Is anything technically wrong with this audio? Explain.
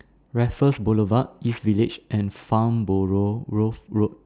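Yes, there is aliasing throughout the speech. It sounds like the audio was resampled to a lower rate without first removing the content that rate can no longer hold, which fits a drop from 16 kHz to 8 kHz. Energy that belonged above 4 kHz has folded back down below that point, landing at unrelated frequencies. The folded content sits around 30 dB below the speech, giving sibilants a gritty, metallic edge, and the spectrum runs hard up to 4 kHz.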